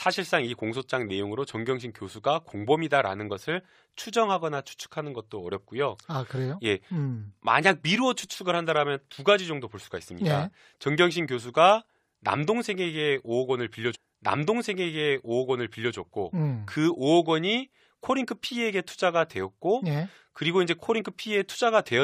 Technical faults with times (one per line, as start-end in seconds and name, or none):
13.94-15.94 stream segment repeated